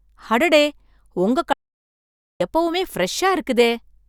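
At 1.53 s the speech cuts off abruptly and does not return until 2.40 s, an audio dropout to silence lasting about 0.87 s. The input was likely lost for that stretch, through a disconnected device, a failed link or a stray mute, while recording carried on writing silence. Unlike a natural pause or a noise gate closing, the gap holds plain silence with no room tone at all, and both edges land hard in mid-flow.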